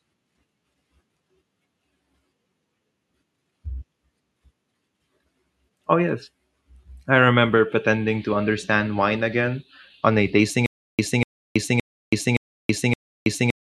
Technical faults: stutter with silent gaps

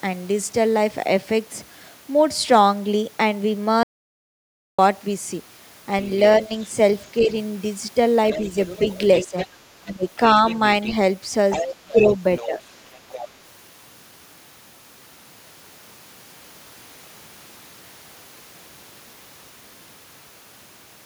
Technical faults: audio dropout to silence; other side's voice leaking through; speech suppressed in double talk

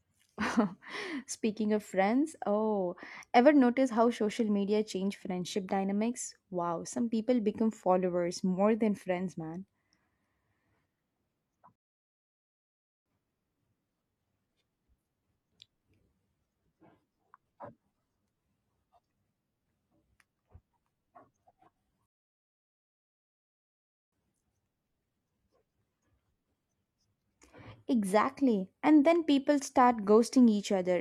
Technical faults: rebuffering stall

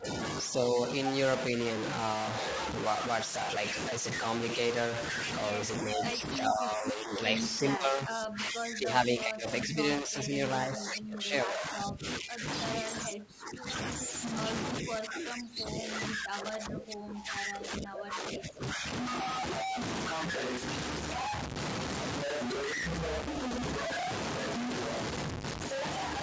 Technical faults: low bit depth without dither; speech suppressed in double talk; echo leak

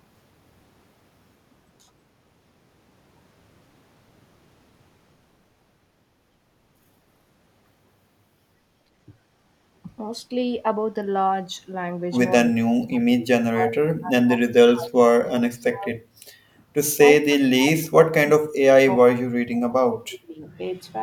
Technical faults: speech suppressed in double talk

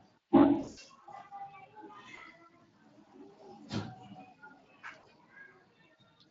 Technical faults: Speex codec; VoIP packet loss concealed by the speech codec

